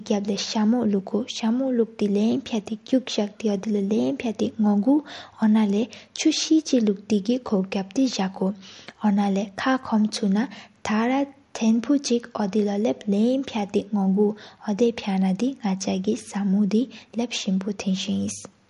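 From start to finish the speech carries plainly audible MP3 compression damage, likely from a low bitrate near 48 kbps: nothing above 11.2 kHz, a sharp ceiling on the spectrogram, while weak lines flicker on and off between frames, giving a watery, swirly texture and metallic chirps on s sounds.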